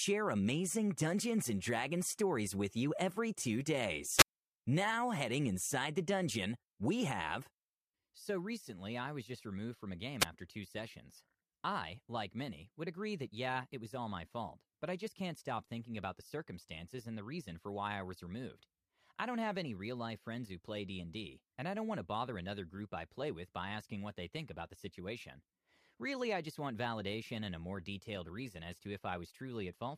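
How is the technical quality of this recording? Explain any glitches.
The recording has two short wireless microphone squelch dropouts. From 4.16 to 4.28 s the speech gives way to a quick swell of hiss, then a hole of near silence lasting about 63 ms. At 10.20 to 10.25 s, right after "removed from a game", the same thing happens with a mute of only about 7 ms. The FM radio link faded, and the receiver's squelch cut the output until the signal recovered.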